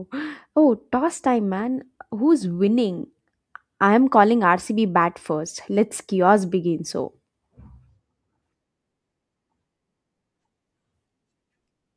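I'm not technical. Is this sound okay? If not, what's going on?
Yes, no faults heard.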